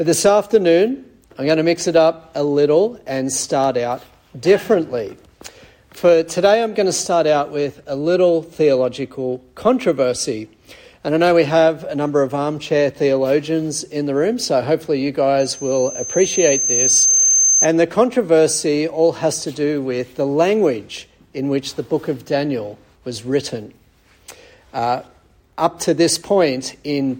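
From 15.40 s to 17.68 s a loudspeaker feedback squeal takes over: the microphone is picking up its own loudspeaker, and at 6.3 kHz the loop gain passes one, so that frequency feeds itself. A thin whistle swells over roughly a second and a half until it sits a few decibels above the rest of the sound. A spectrogram shows a single bright horizontal line at 6.3 kHz, brightening as it builds, and the waveform's envelope grows correspondingly.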